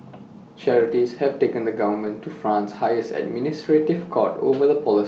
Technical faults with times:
0.71-1.05 lost packet rebuilt from error correction
1.93-2.07 lost packet rebuilt from error correction

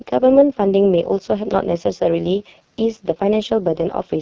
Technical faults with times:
0.00-4.21 AMR wideband (HD Voice) codec
1.51-1.53 loud pop

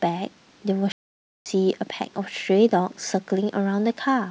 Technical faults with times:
0.92-1.46 playback stall

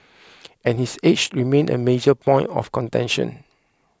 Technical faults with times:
1.24-1.26 chunks out of order

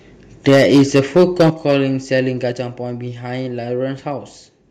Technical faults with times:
0.47-1.74 microphone overload
0.49 microphone volume stepped down
1.50 microphone volume stepped down
2.52 microphone volume stepped down

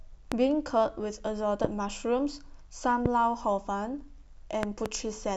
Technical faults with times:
0.32-0.34 loud pop
1.64-1.67 loud pop
3.06-3.08 loud pop
4.63-4.88 loud pop

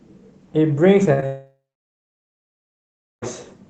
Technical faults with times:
1.03-1.24 short concealed packet loss
1.13-1.20 burst of packet loss
1.26-3.30 long network dropout

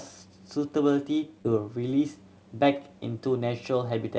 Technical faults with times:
1.42-1.46 short concealed packet loss
3.38-3.42 short concealed packet loss

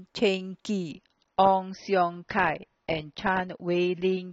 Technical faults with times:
0.91-4.32 adaptive stream at a lower bitrate

